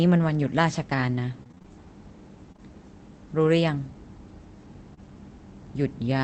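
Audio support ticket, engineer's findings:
Choppy, robotic stretch, 1.43–1.66 s: six short dropouts, none longer than about 25 ms, with nearly half the span filled by repeated last-sound continuation. Repeated packet loss in the jitter buffer/decoder path. Concealment patches each hole before the next arrives, giving a choppy texture with pieces missing.

Brief smear and wobble, 2.52–2.60 s: two back-to-back holes of about 20 ms each, patched from the preceding sound and blended back. Short concealed packet loss in the call path. Another at 4.94–5.00 s, where roughly 15 ms of real audio is dropped and a short sound may vanish.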